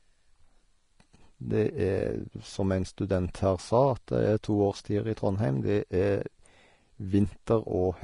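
Vorbis compression runs throughout the clip: the speech is plainly hissy and grainy, with a dulled top end, roughened tones and blurred attacks. The likely cause is low-bitrate Vorbis coding, which fits about 33 kbps, which cut the treble and quantised the remaining fine detail into noise.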